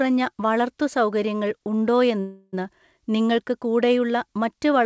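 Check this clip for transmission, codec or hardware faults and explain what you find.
One transmission fault is audible, a call audio freeze, heard through a G.722 call path whose spectrum stops at 8 kHz. From 2.20 to 2.55 s, just before "നിങ്ങൾക്ക് കൂടെയുള്ള", the sound stalls and the last moment is stretched into a fading buzz for about 330 ms. This is likely packets arriving late and the jitter buffer running dry. Nothing is lost, and the speech resumes later than it should. On a spectrogram this appears as a smeared, decaying horizontal band, and on the waveform as a shrinking repetitive stretch.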